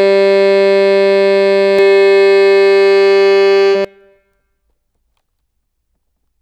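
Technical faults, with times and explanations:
1.79–3.85 s, doubled audio track: the music is joined by a second, full-band copy of itself running roughly 400 ms behind and around 5 dB quieter, so every attack is followed by a clean repeat. The copy carries no reverberant tail or room colouring, which separates it from a natural echo, and it cuts in and out abruptly at both ends. The likely cause is the same signal being captured again through a slower path and summed with the original.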